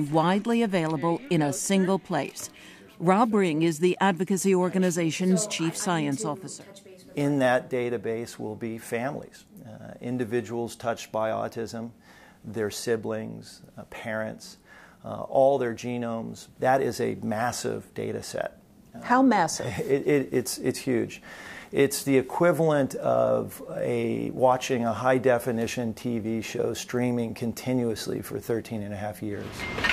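The recording has no technical faults to report. Nothing heard anywhere in it points to a problem in how the sound was captured, processed or delivered.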